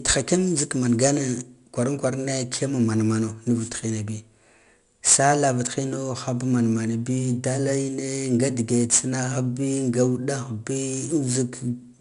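From start to finish the speech carries 4-bit ADPCM compression, plainly audible as a gritty hiss that rides on every loud syllable and falls away in pauses, with roughness on sharp consonant onsets where the coarse adaptive step lags the signal. Nothing reaches above 10.6 kHz, which fits a sample rate near 22 kHz and a data rate around 89 kbps. A spectrogram shows a level-tracking broadband noise haze and a hard ceiling at 10.6 kHz.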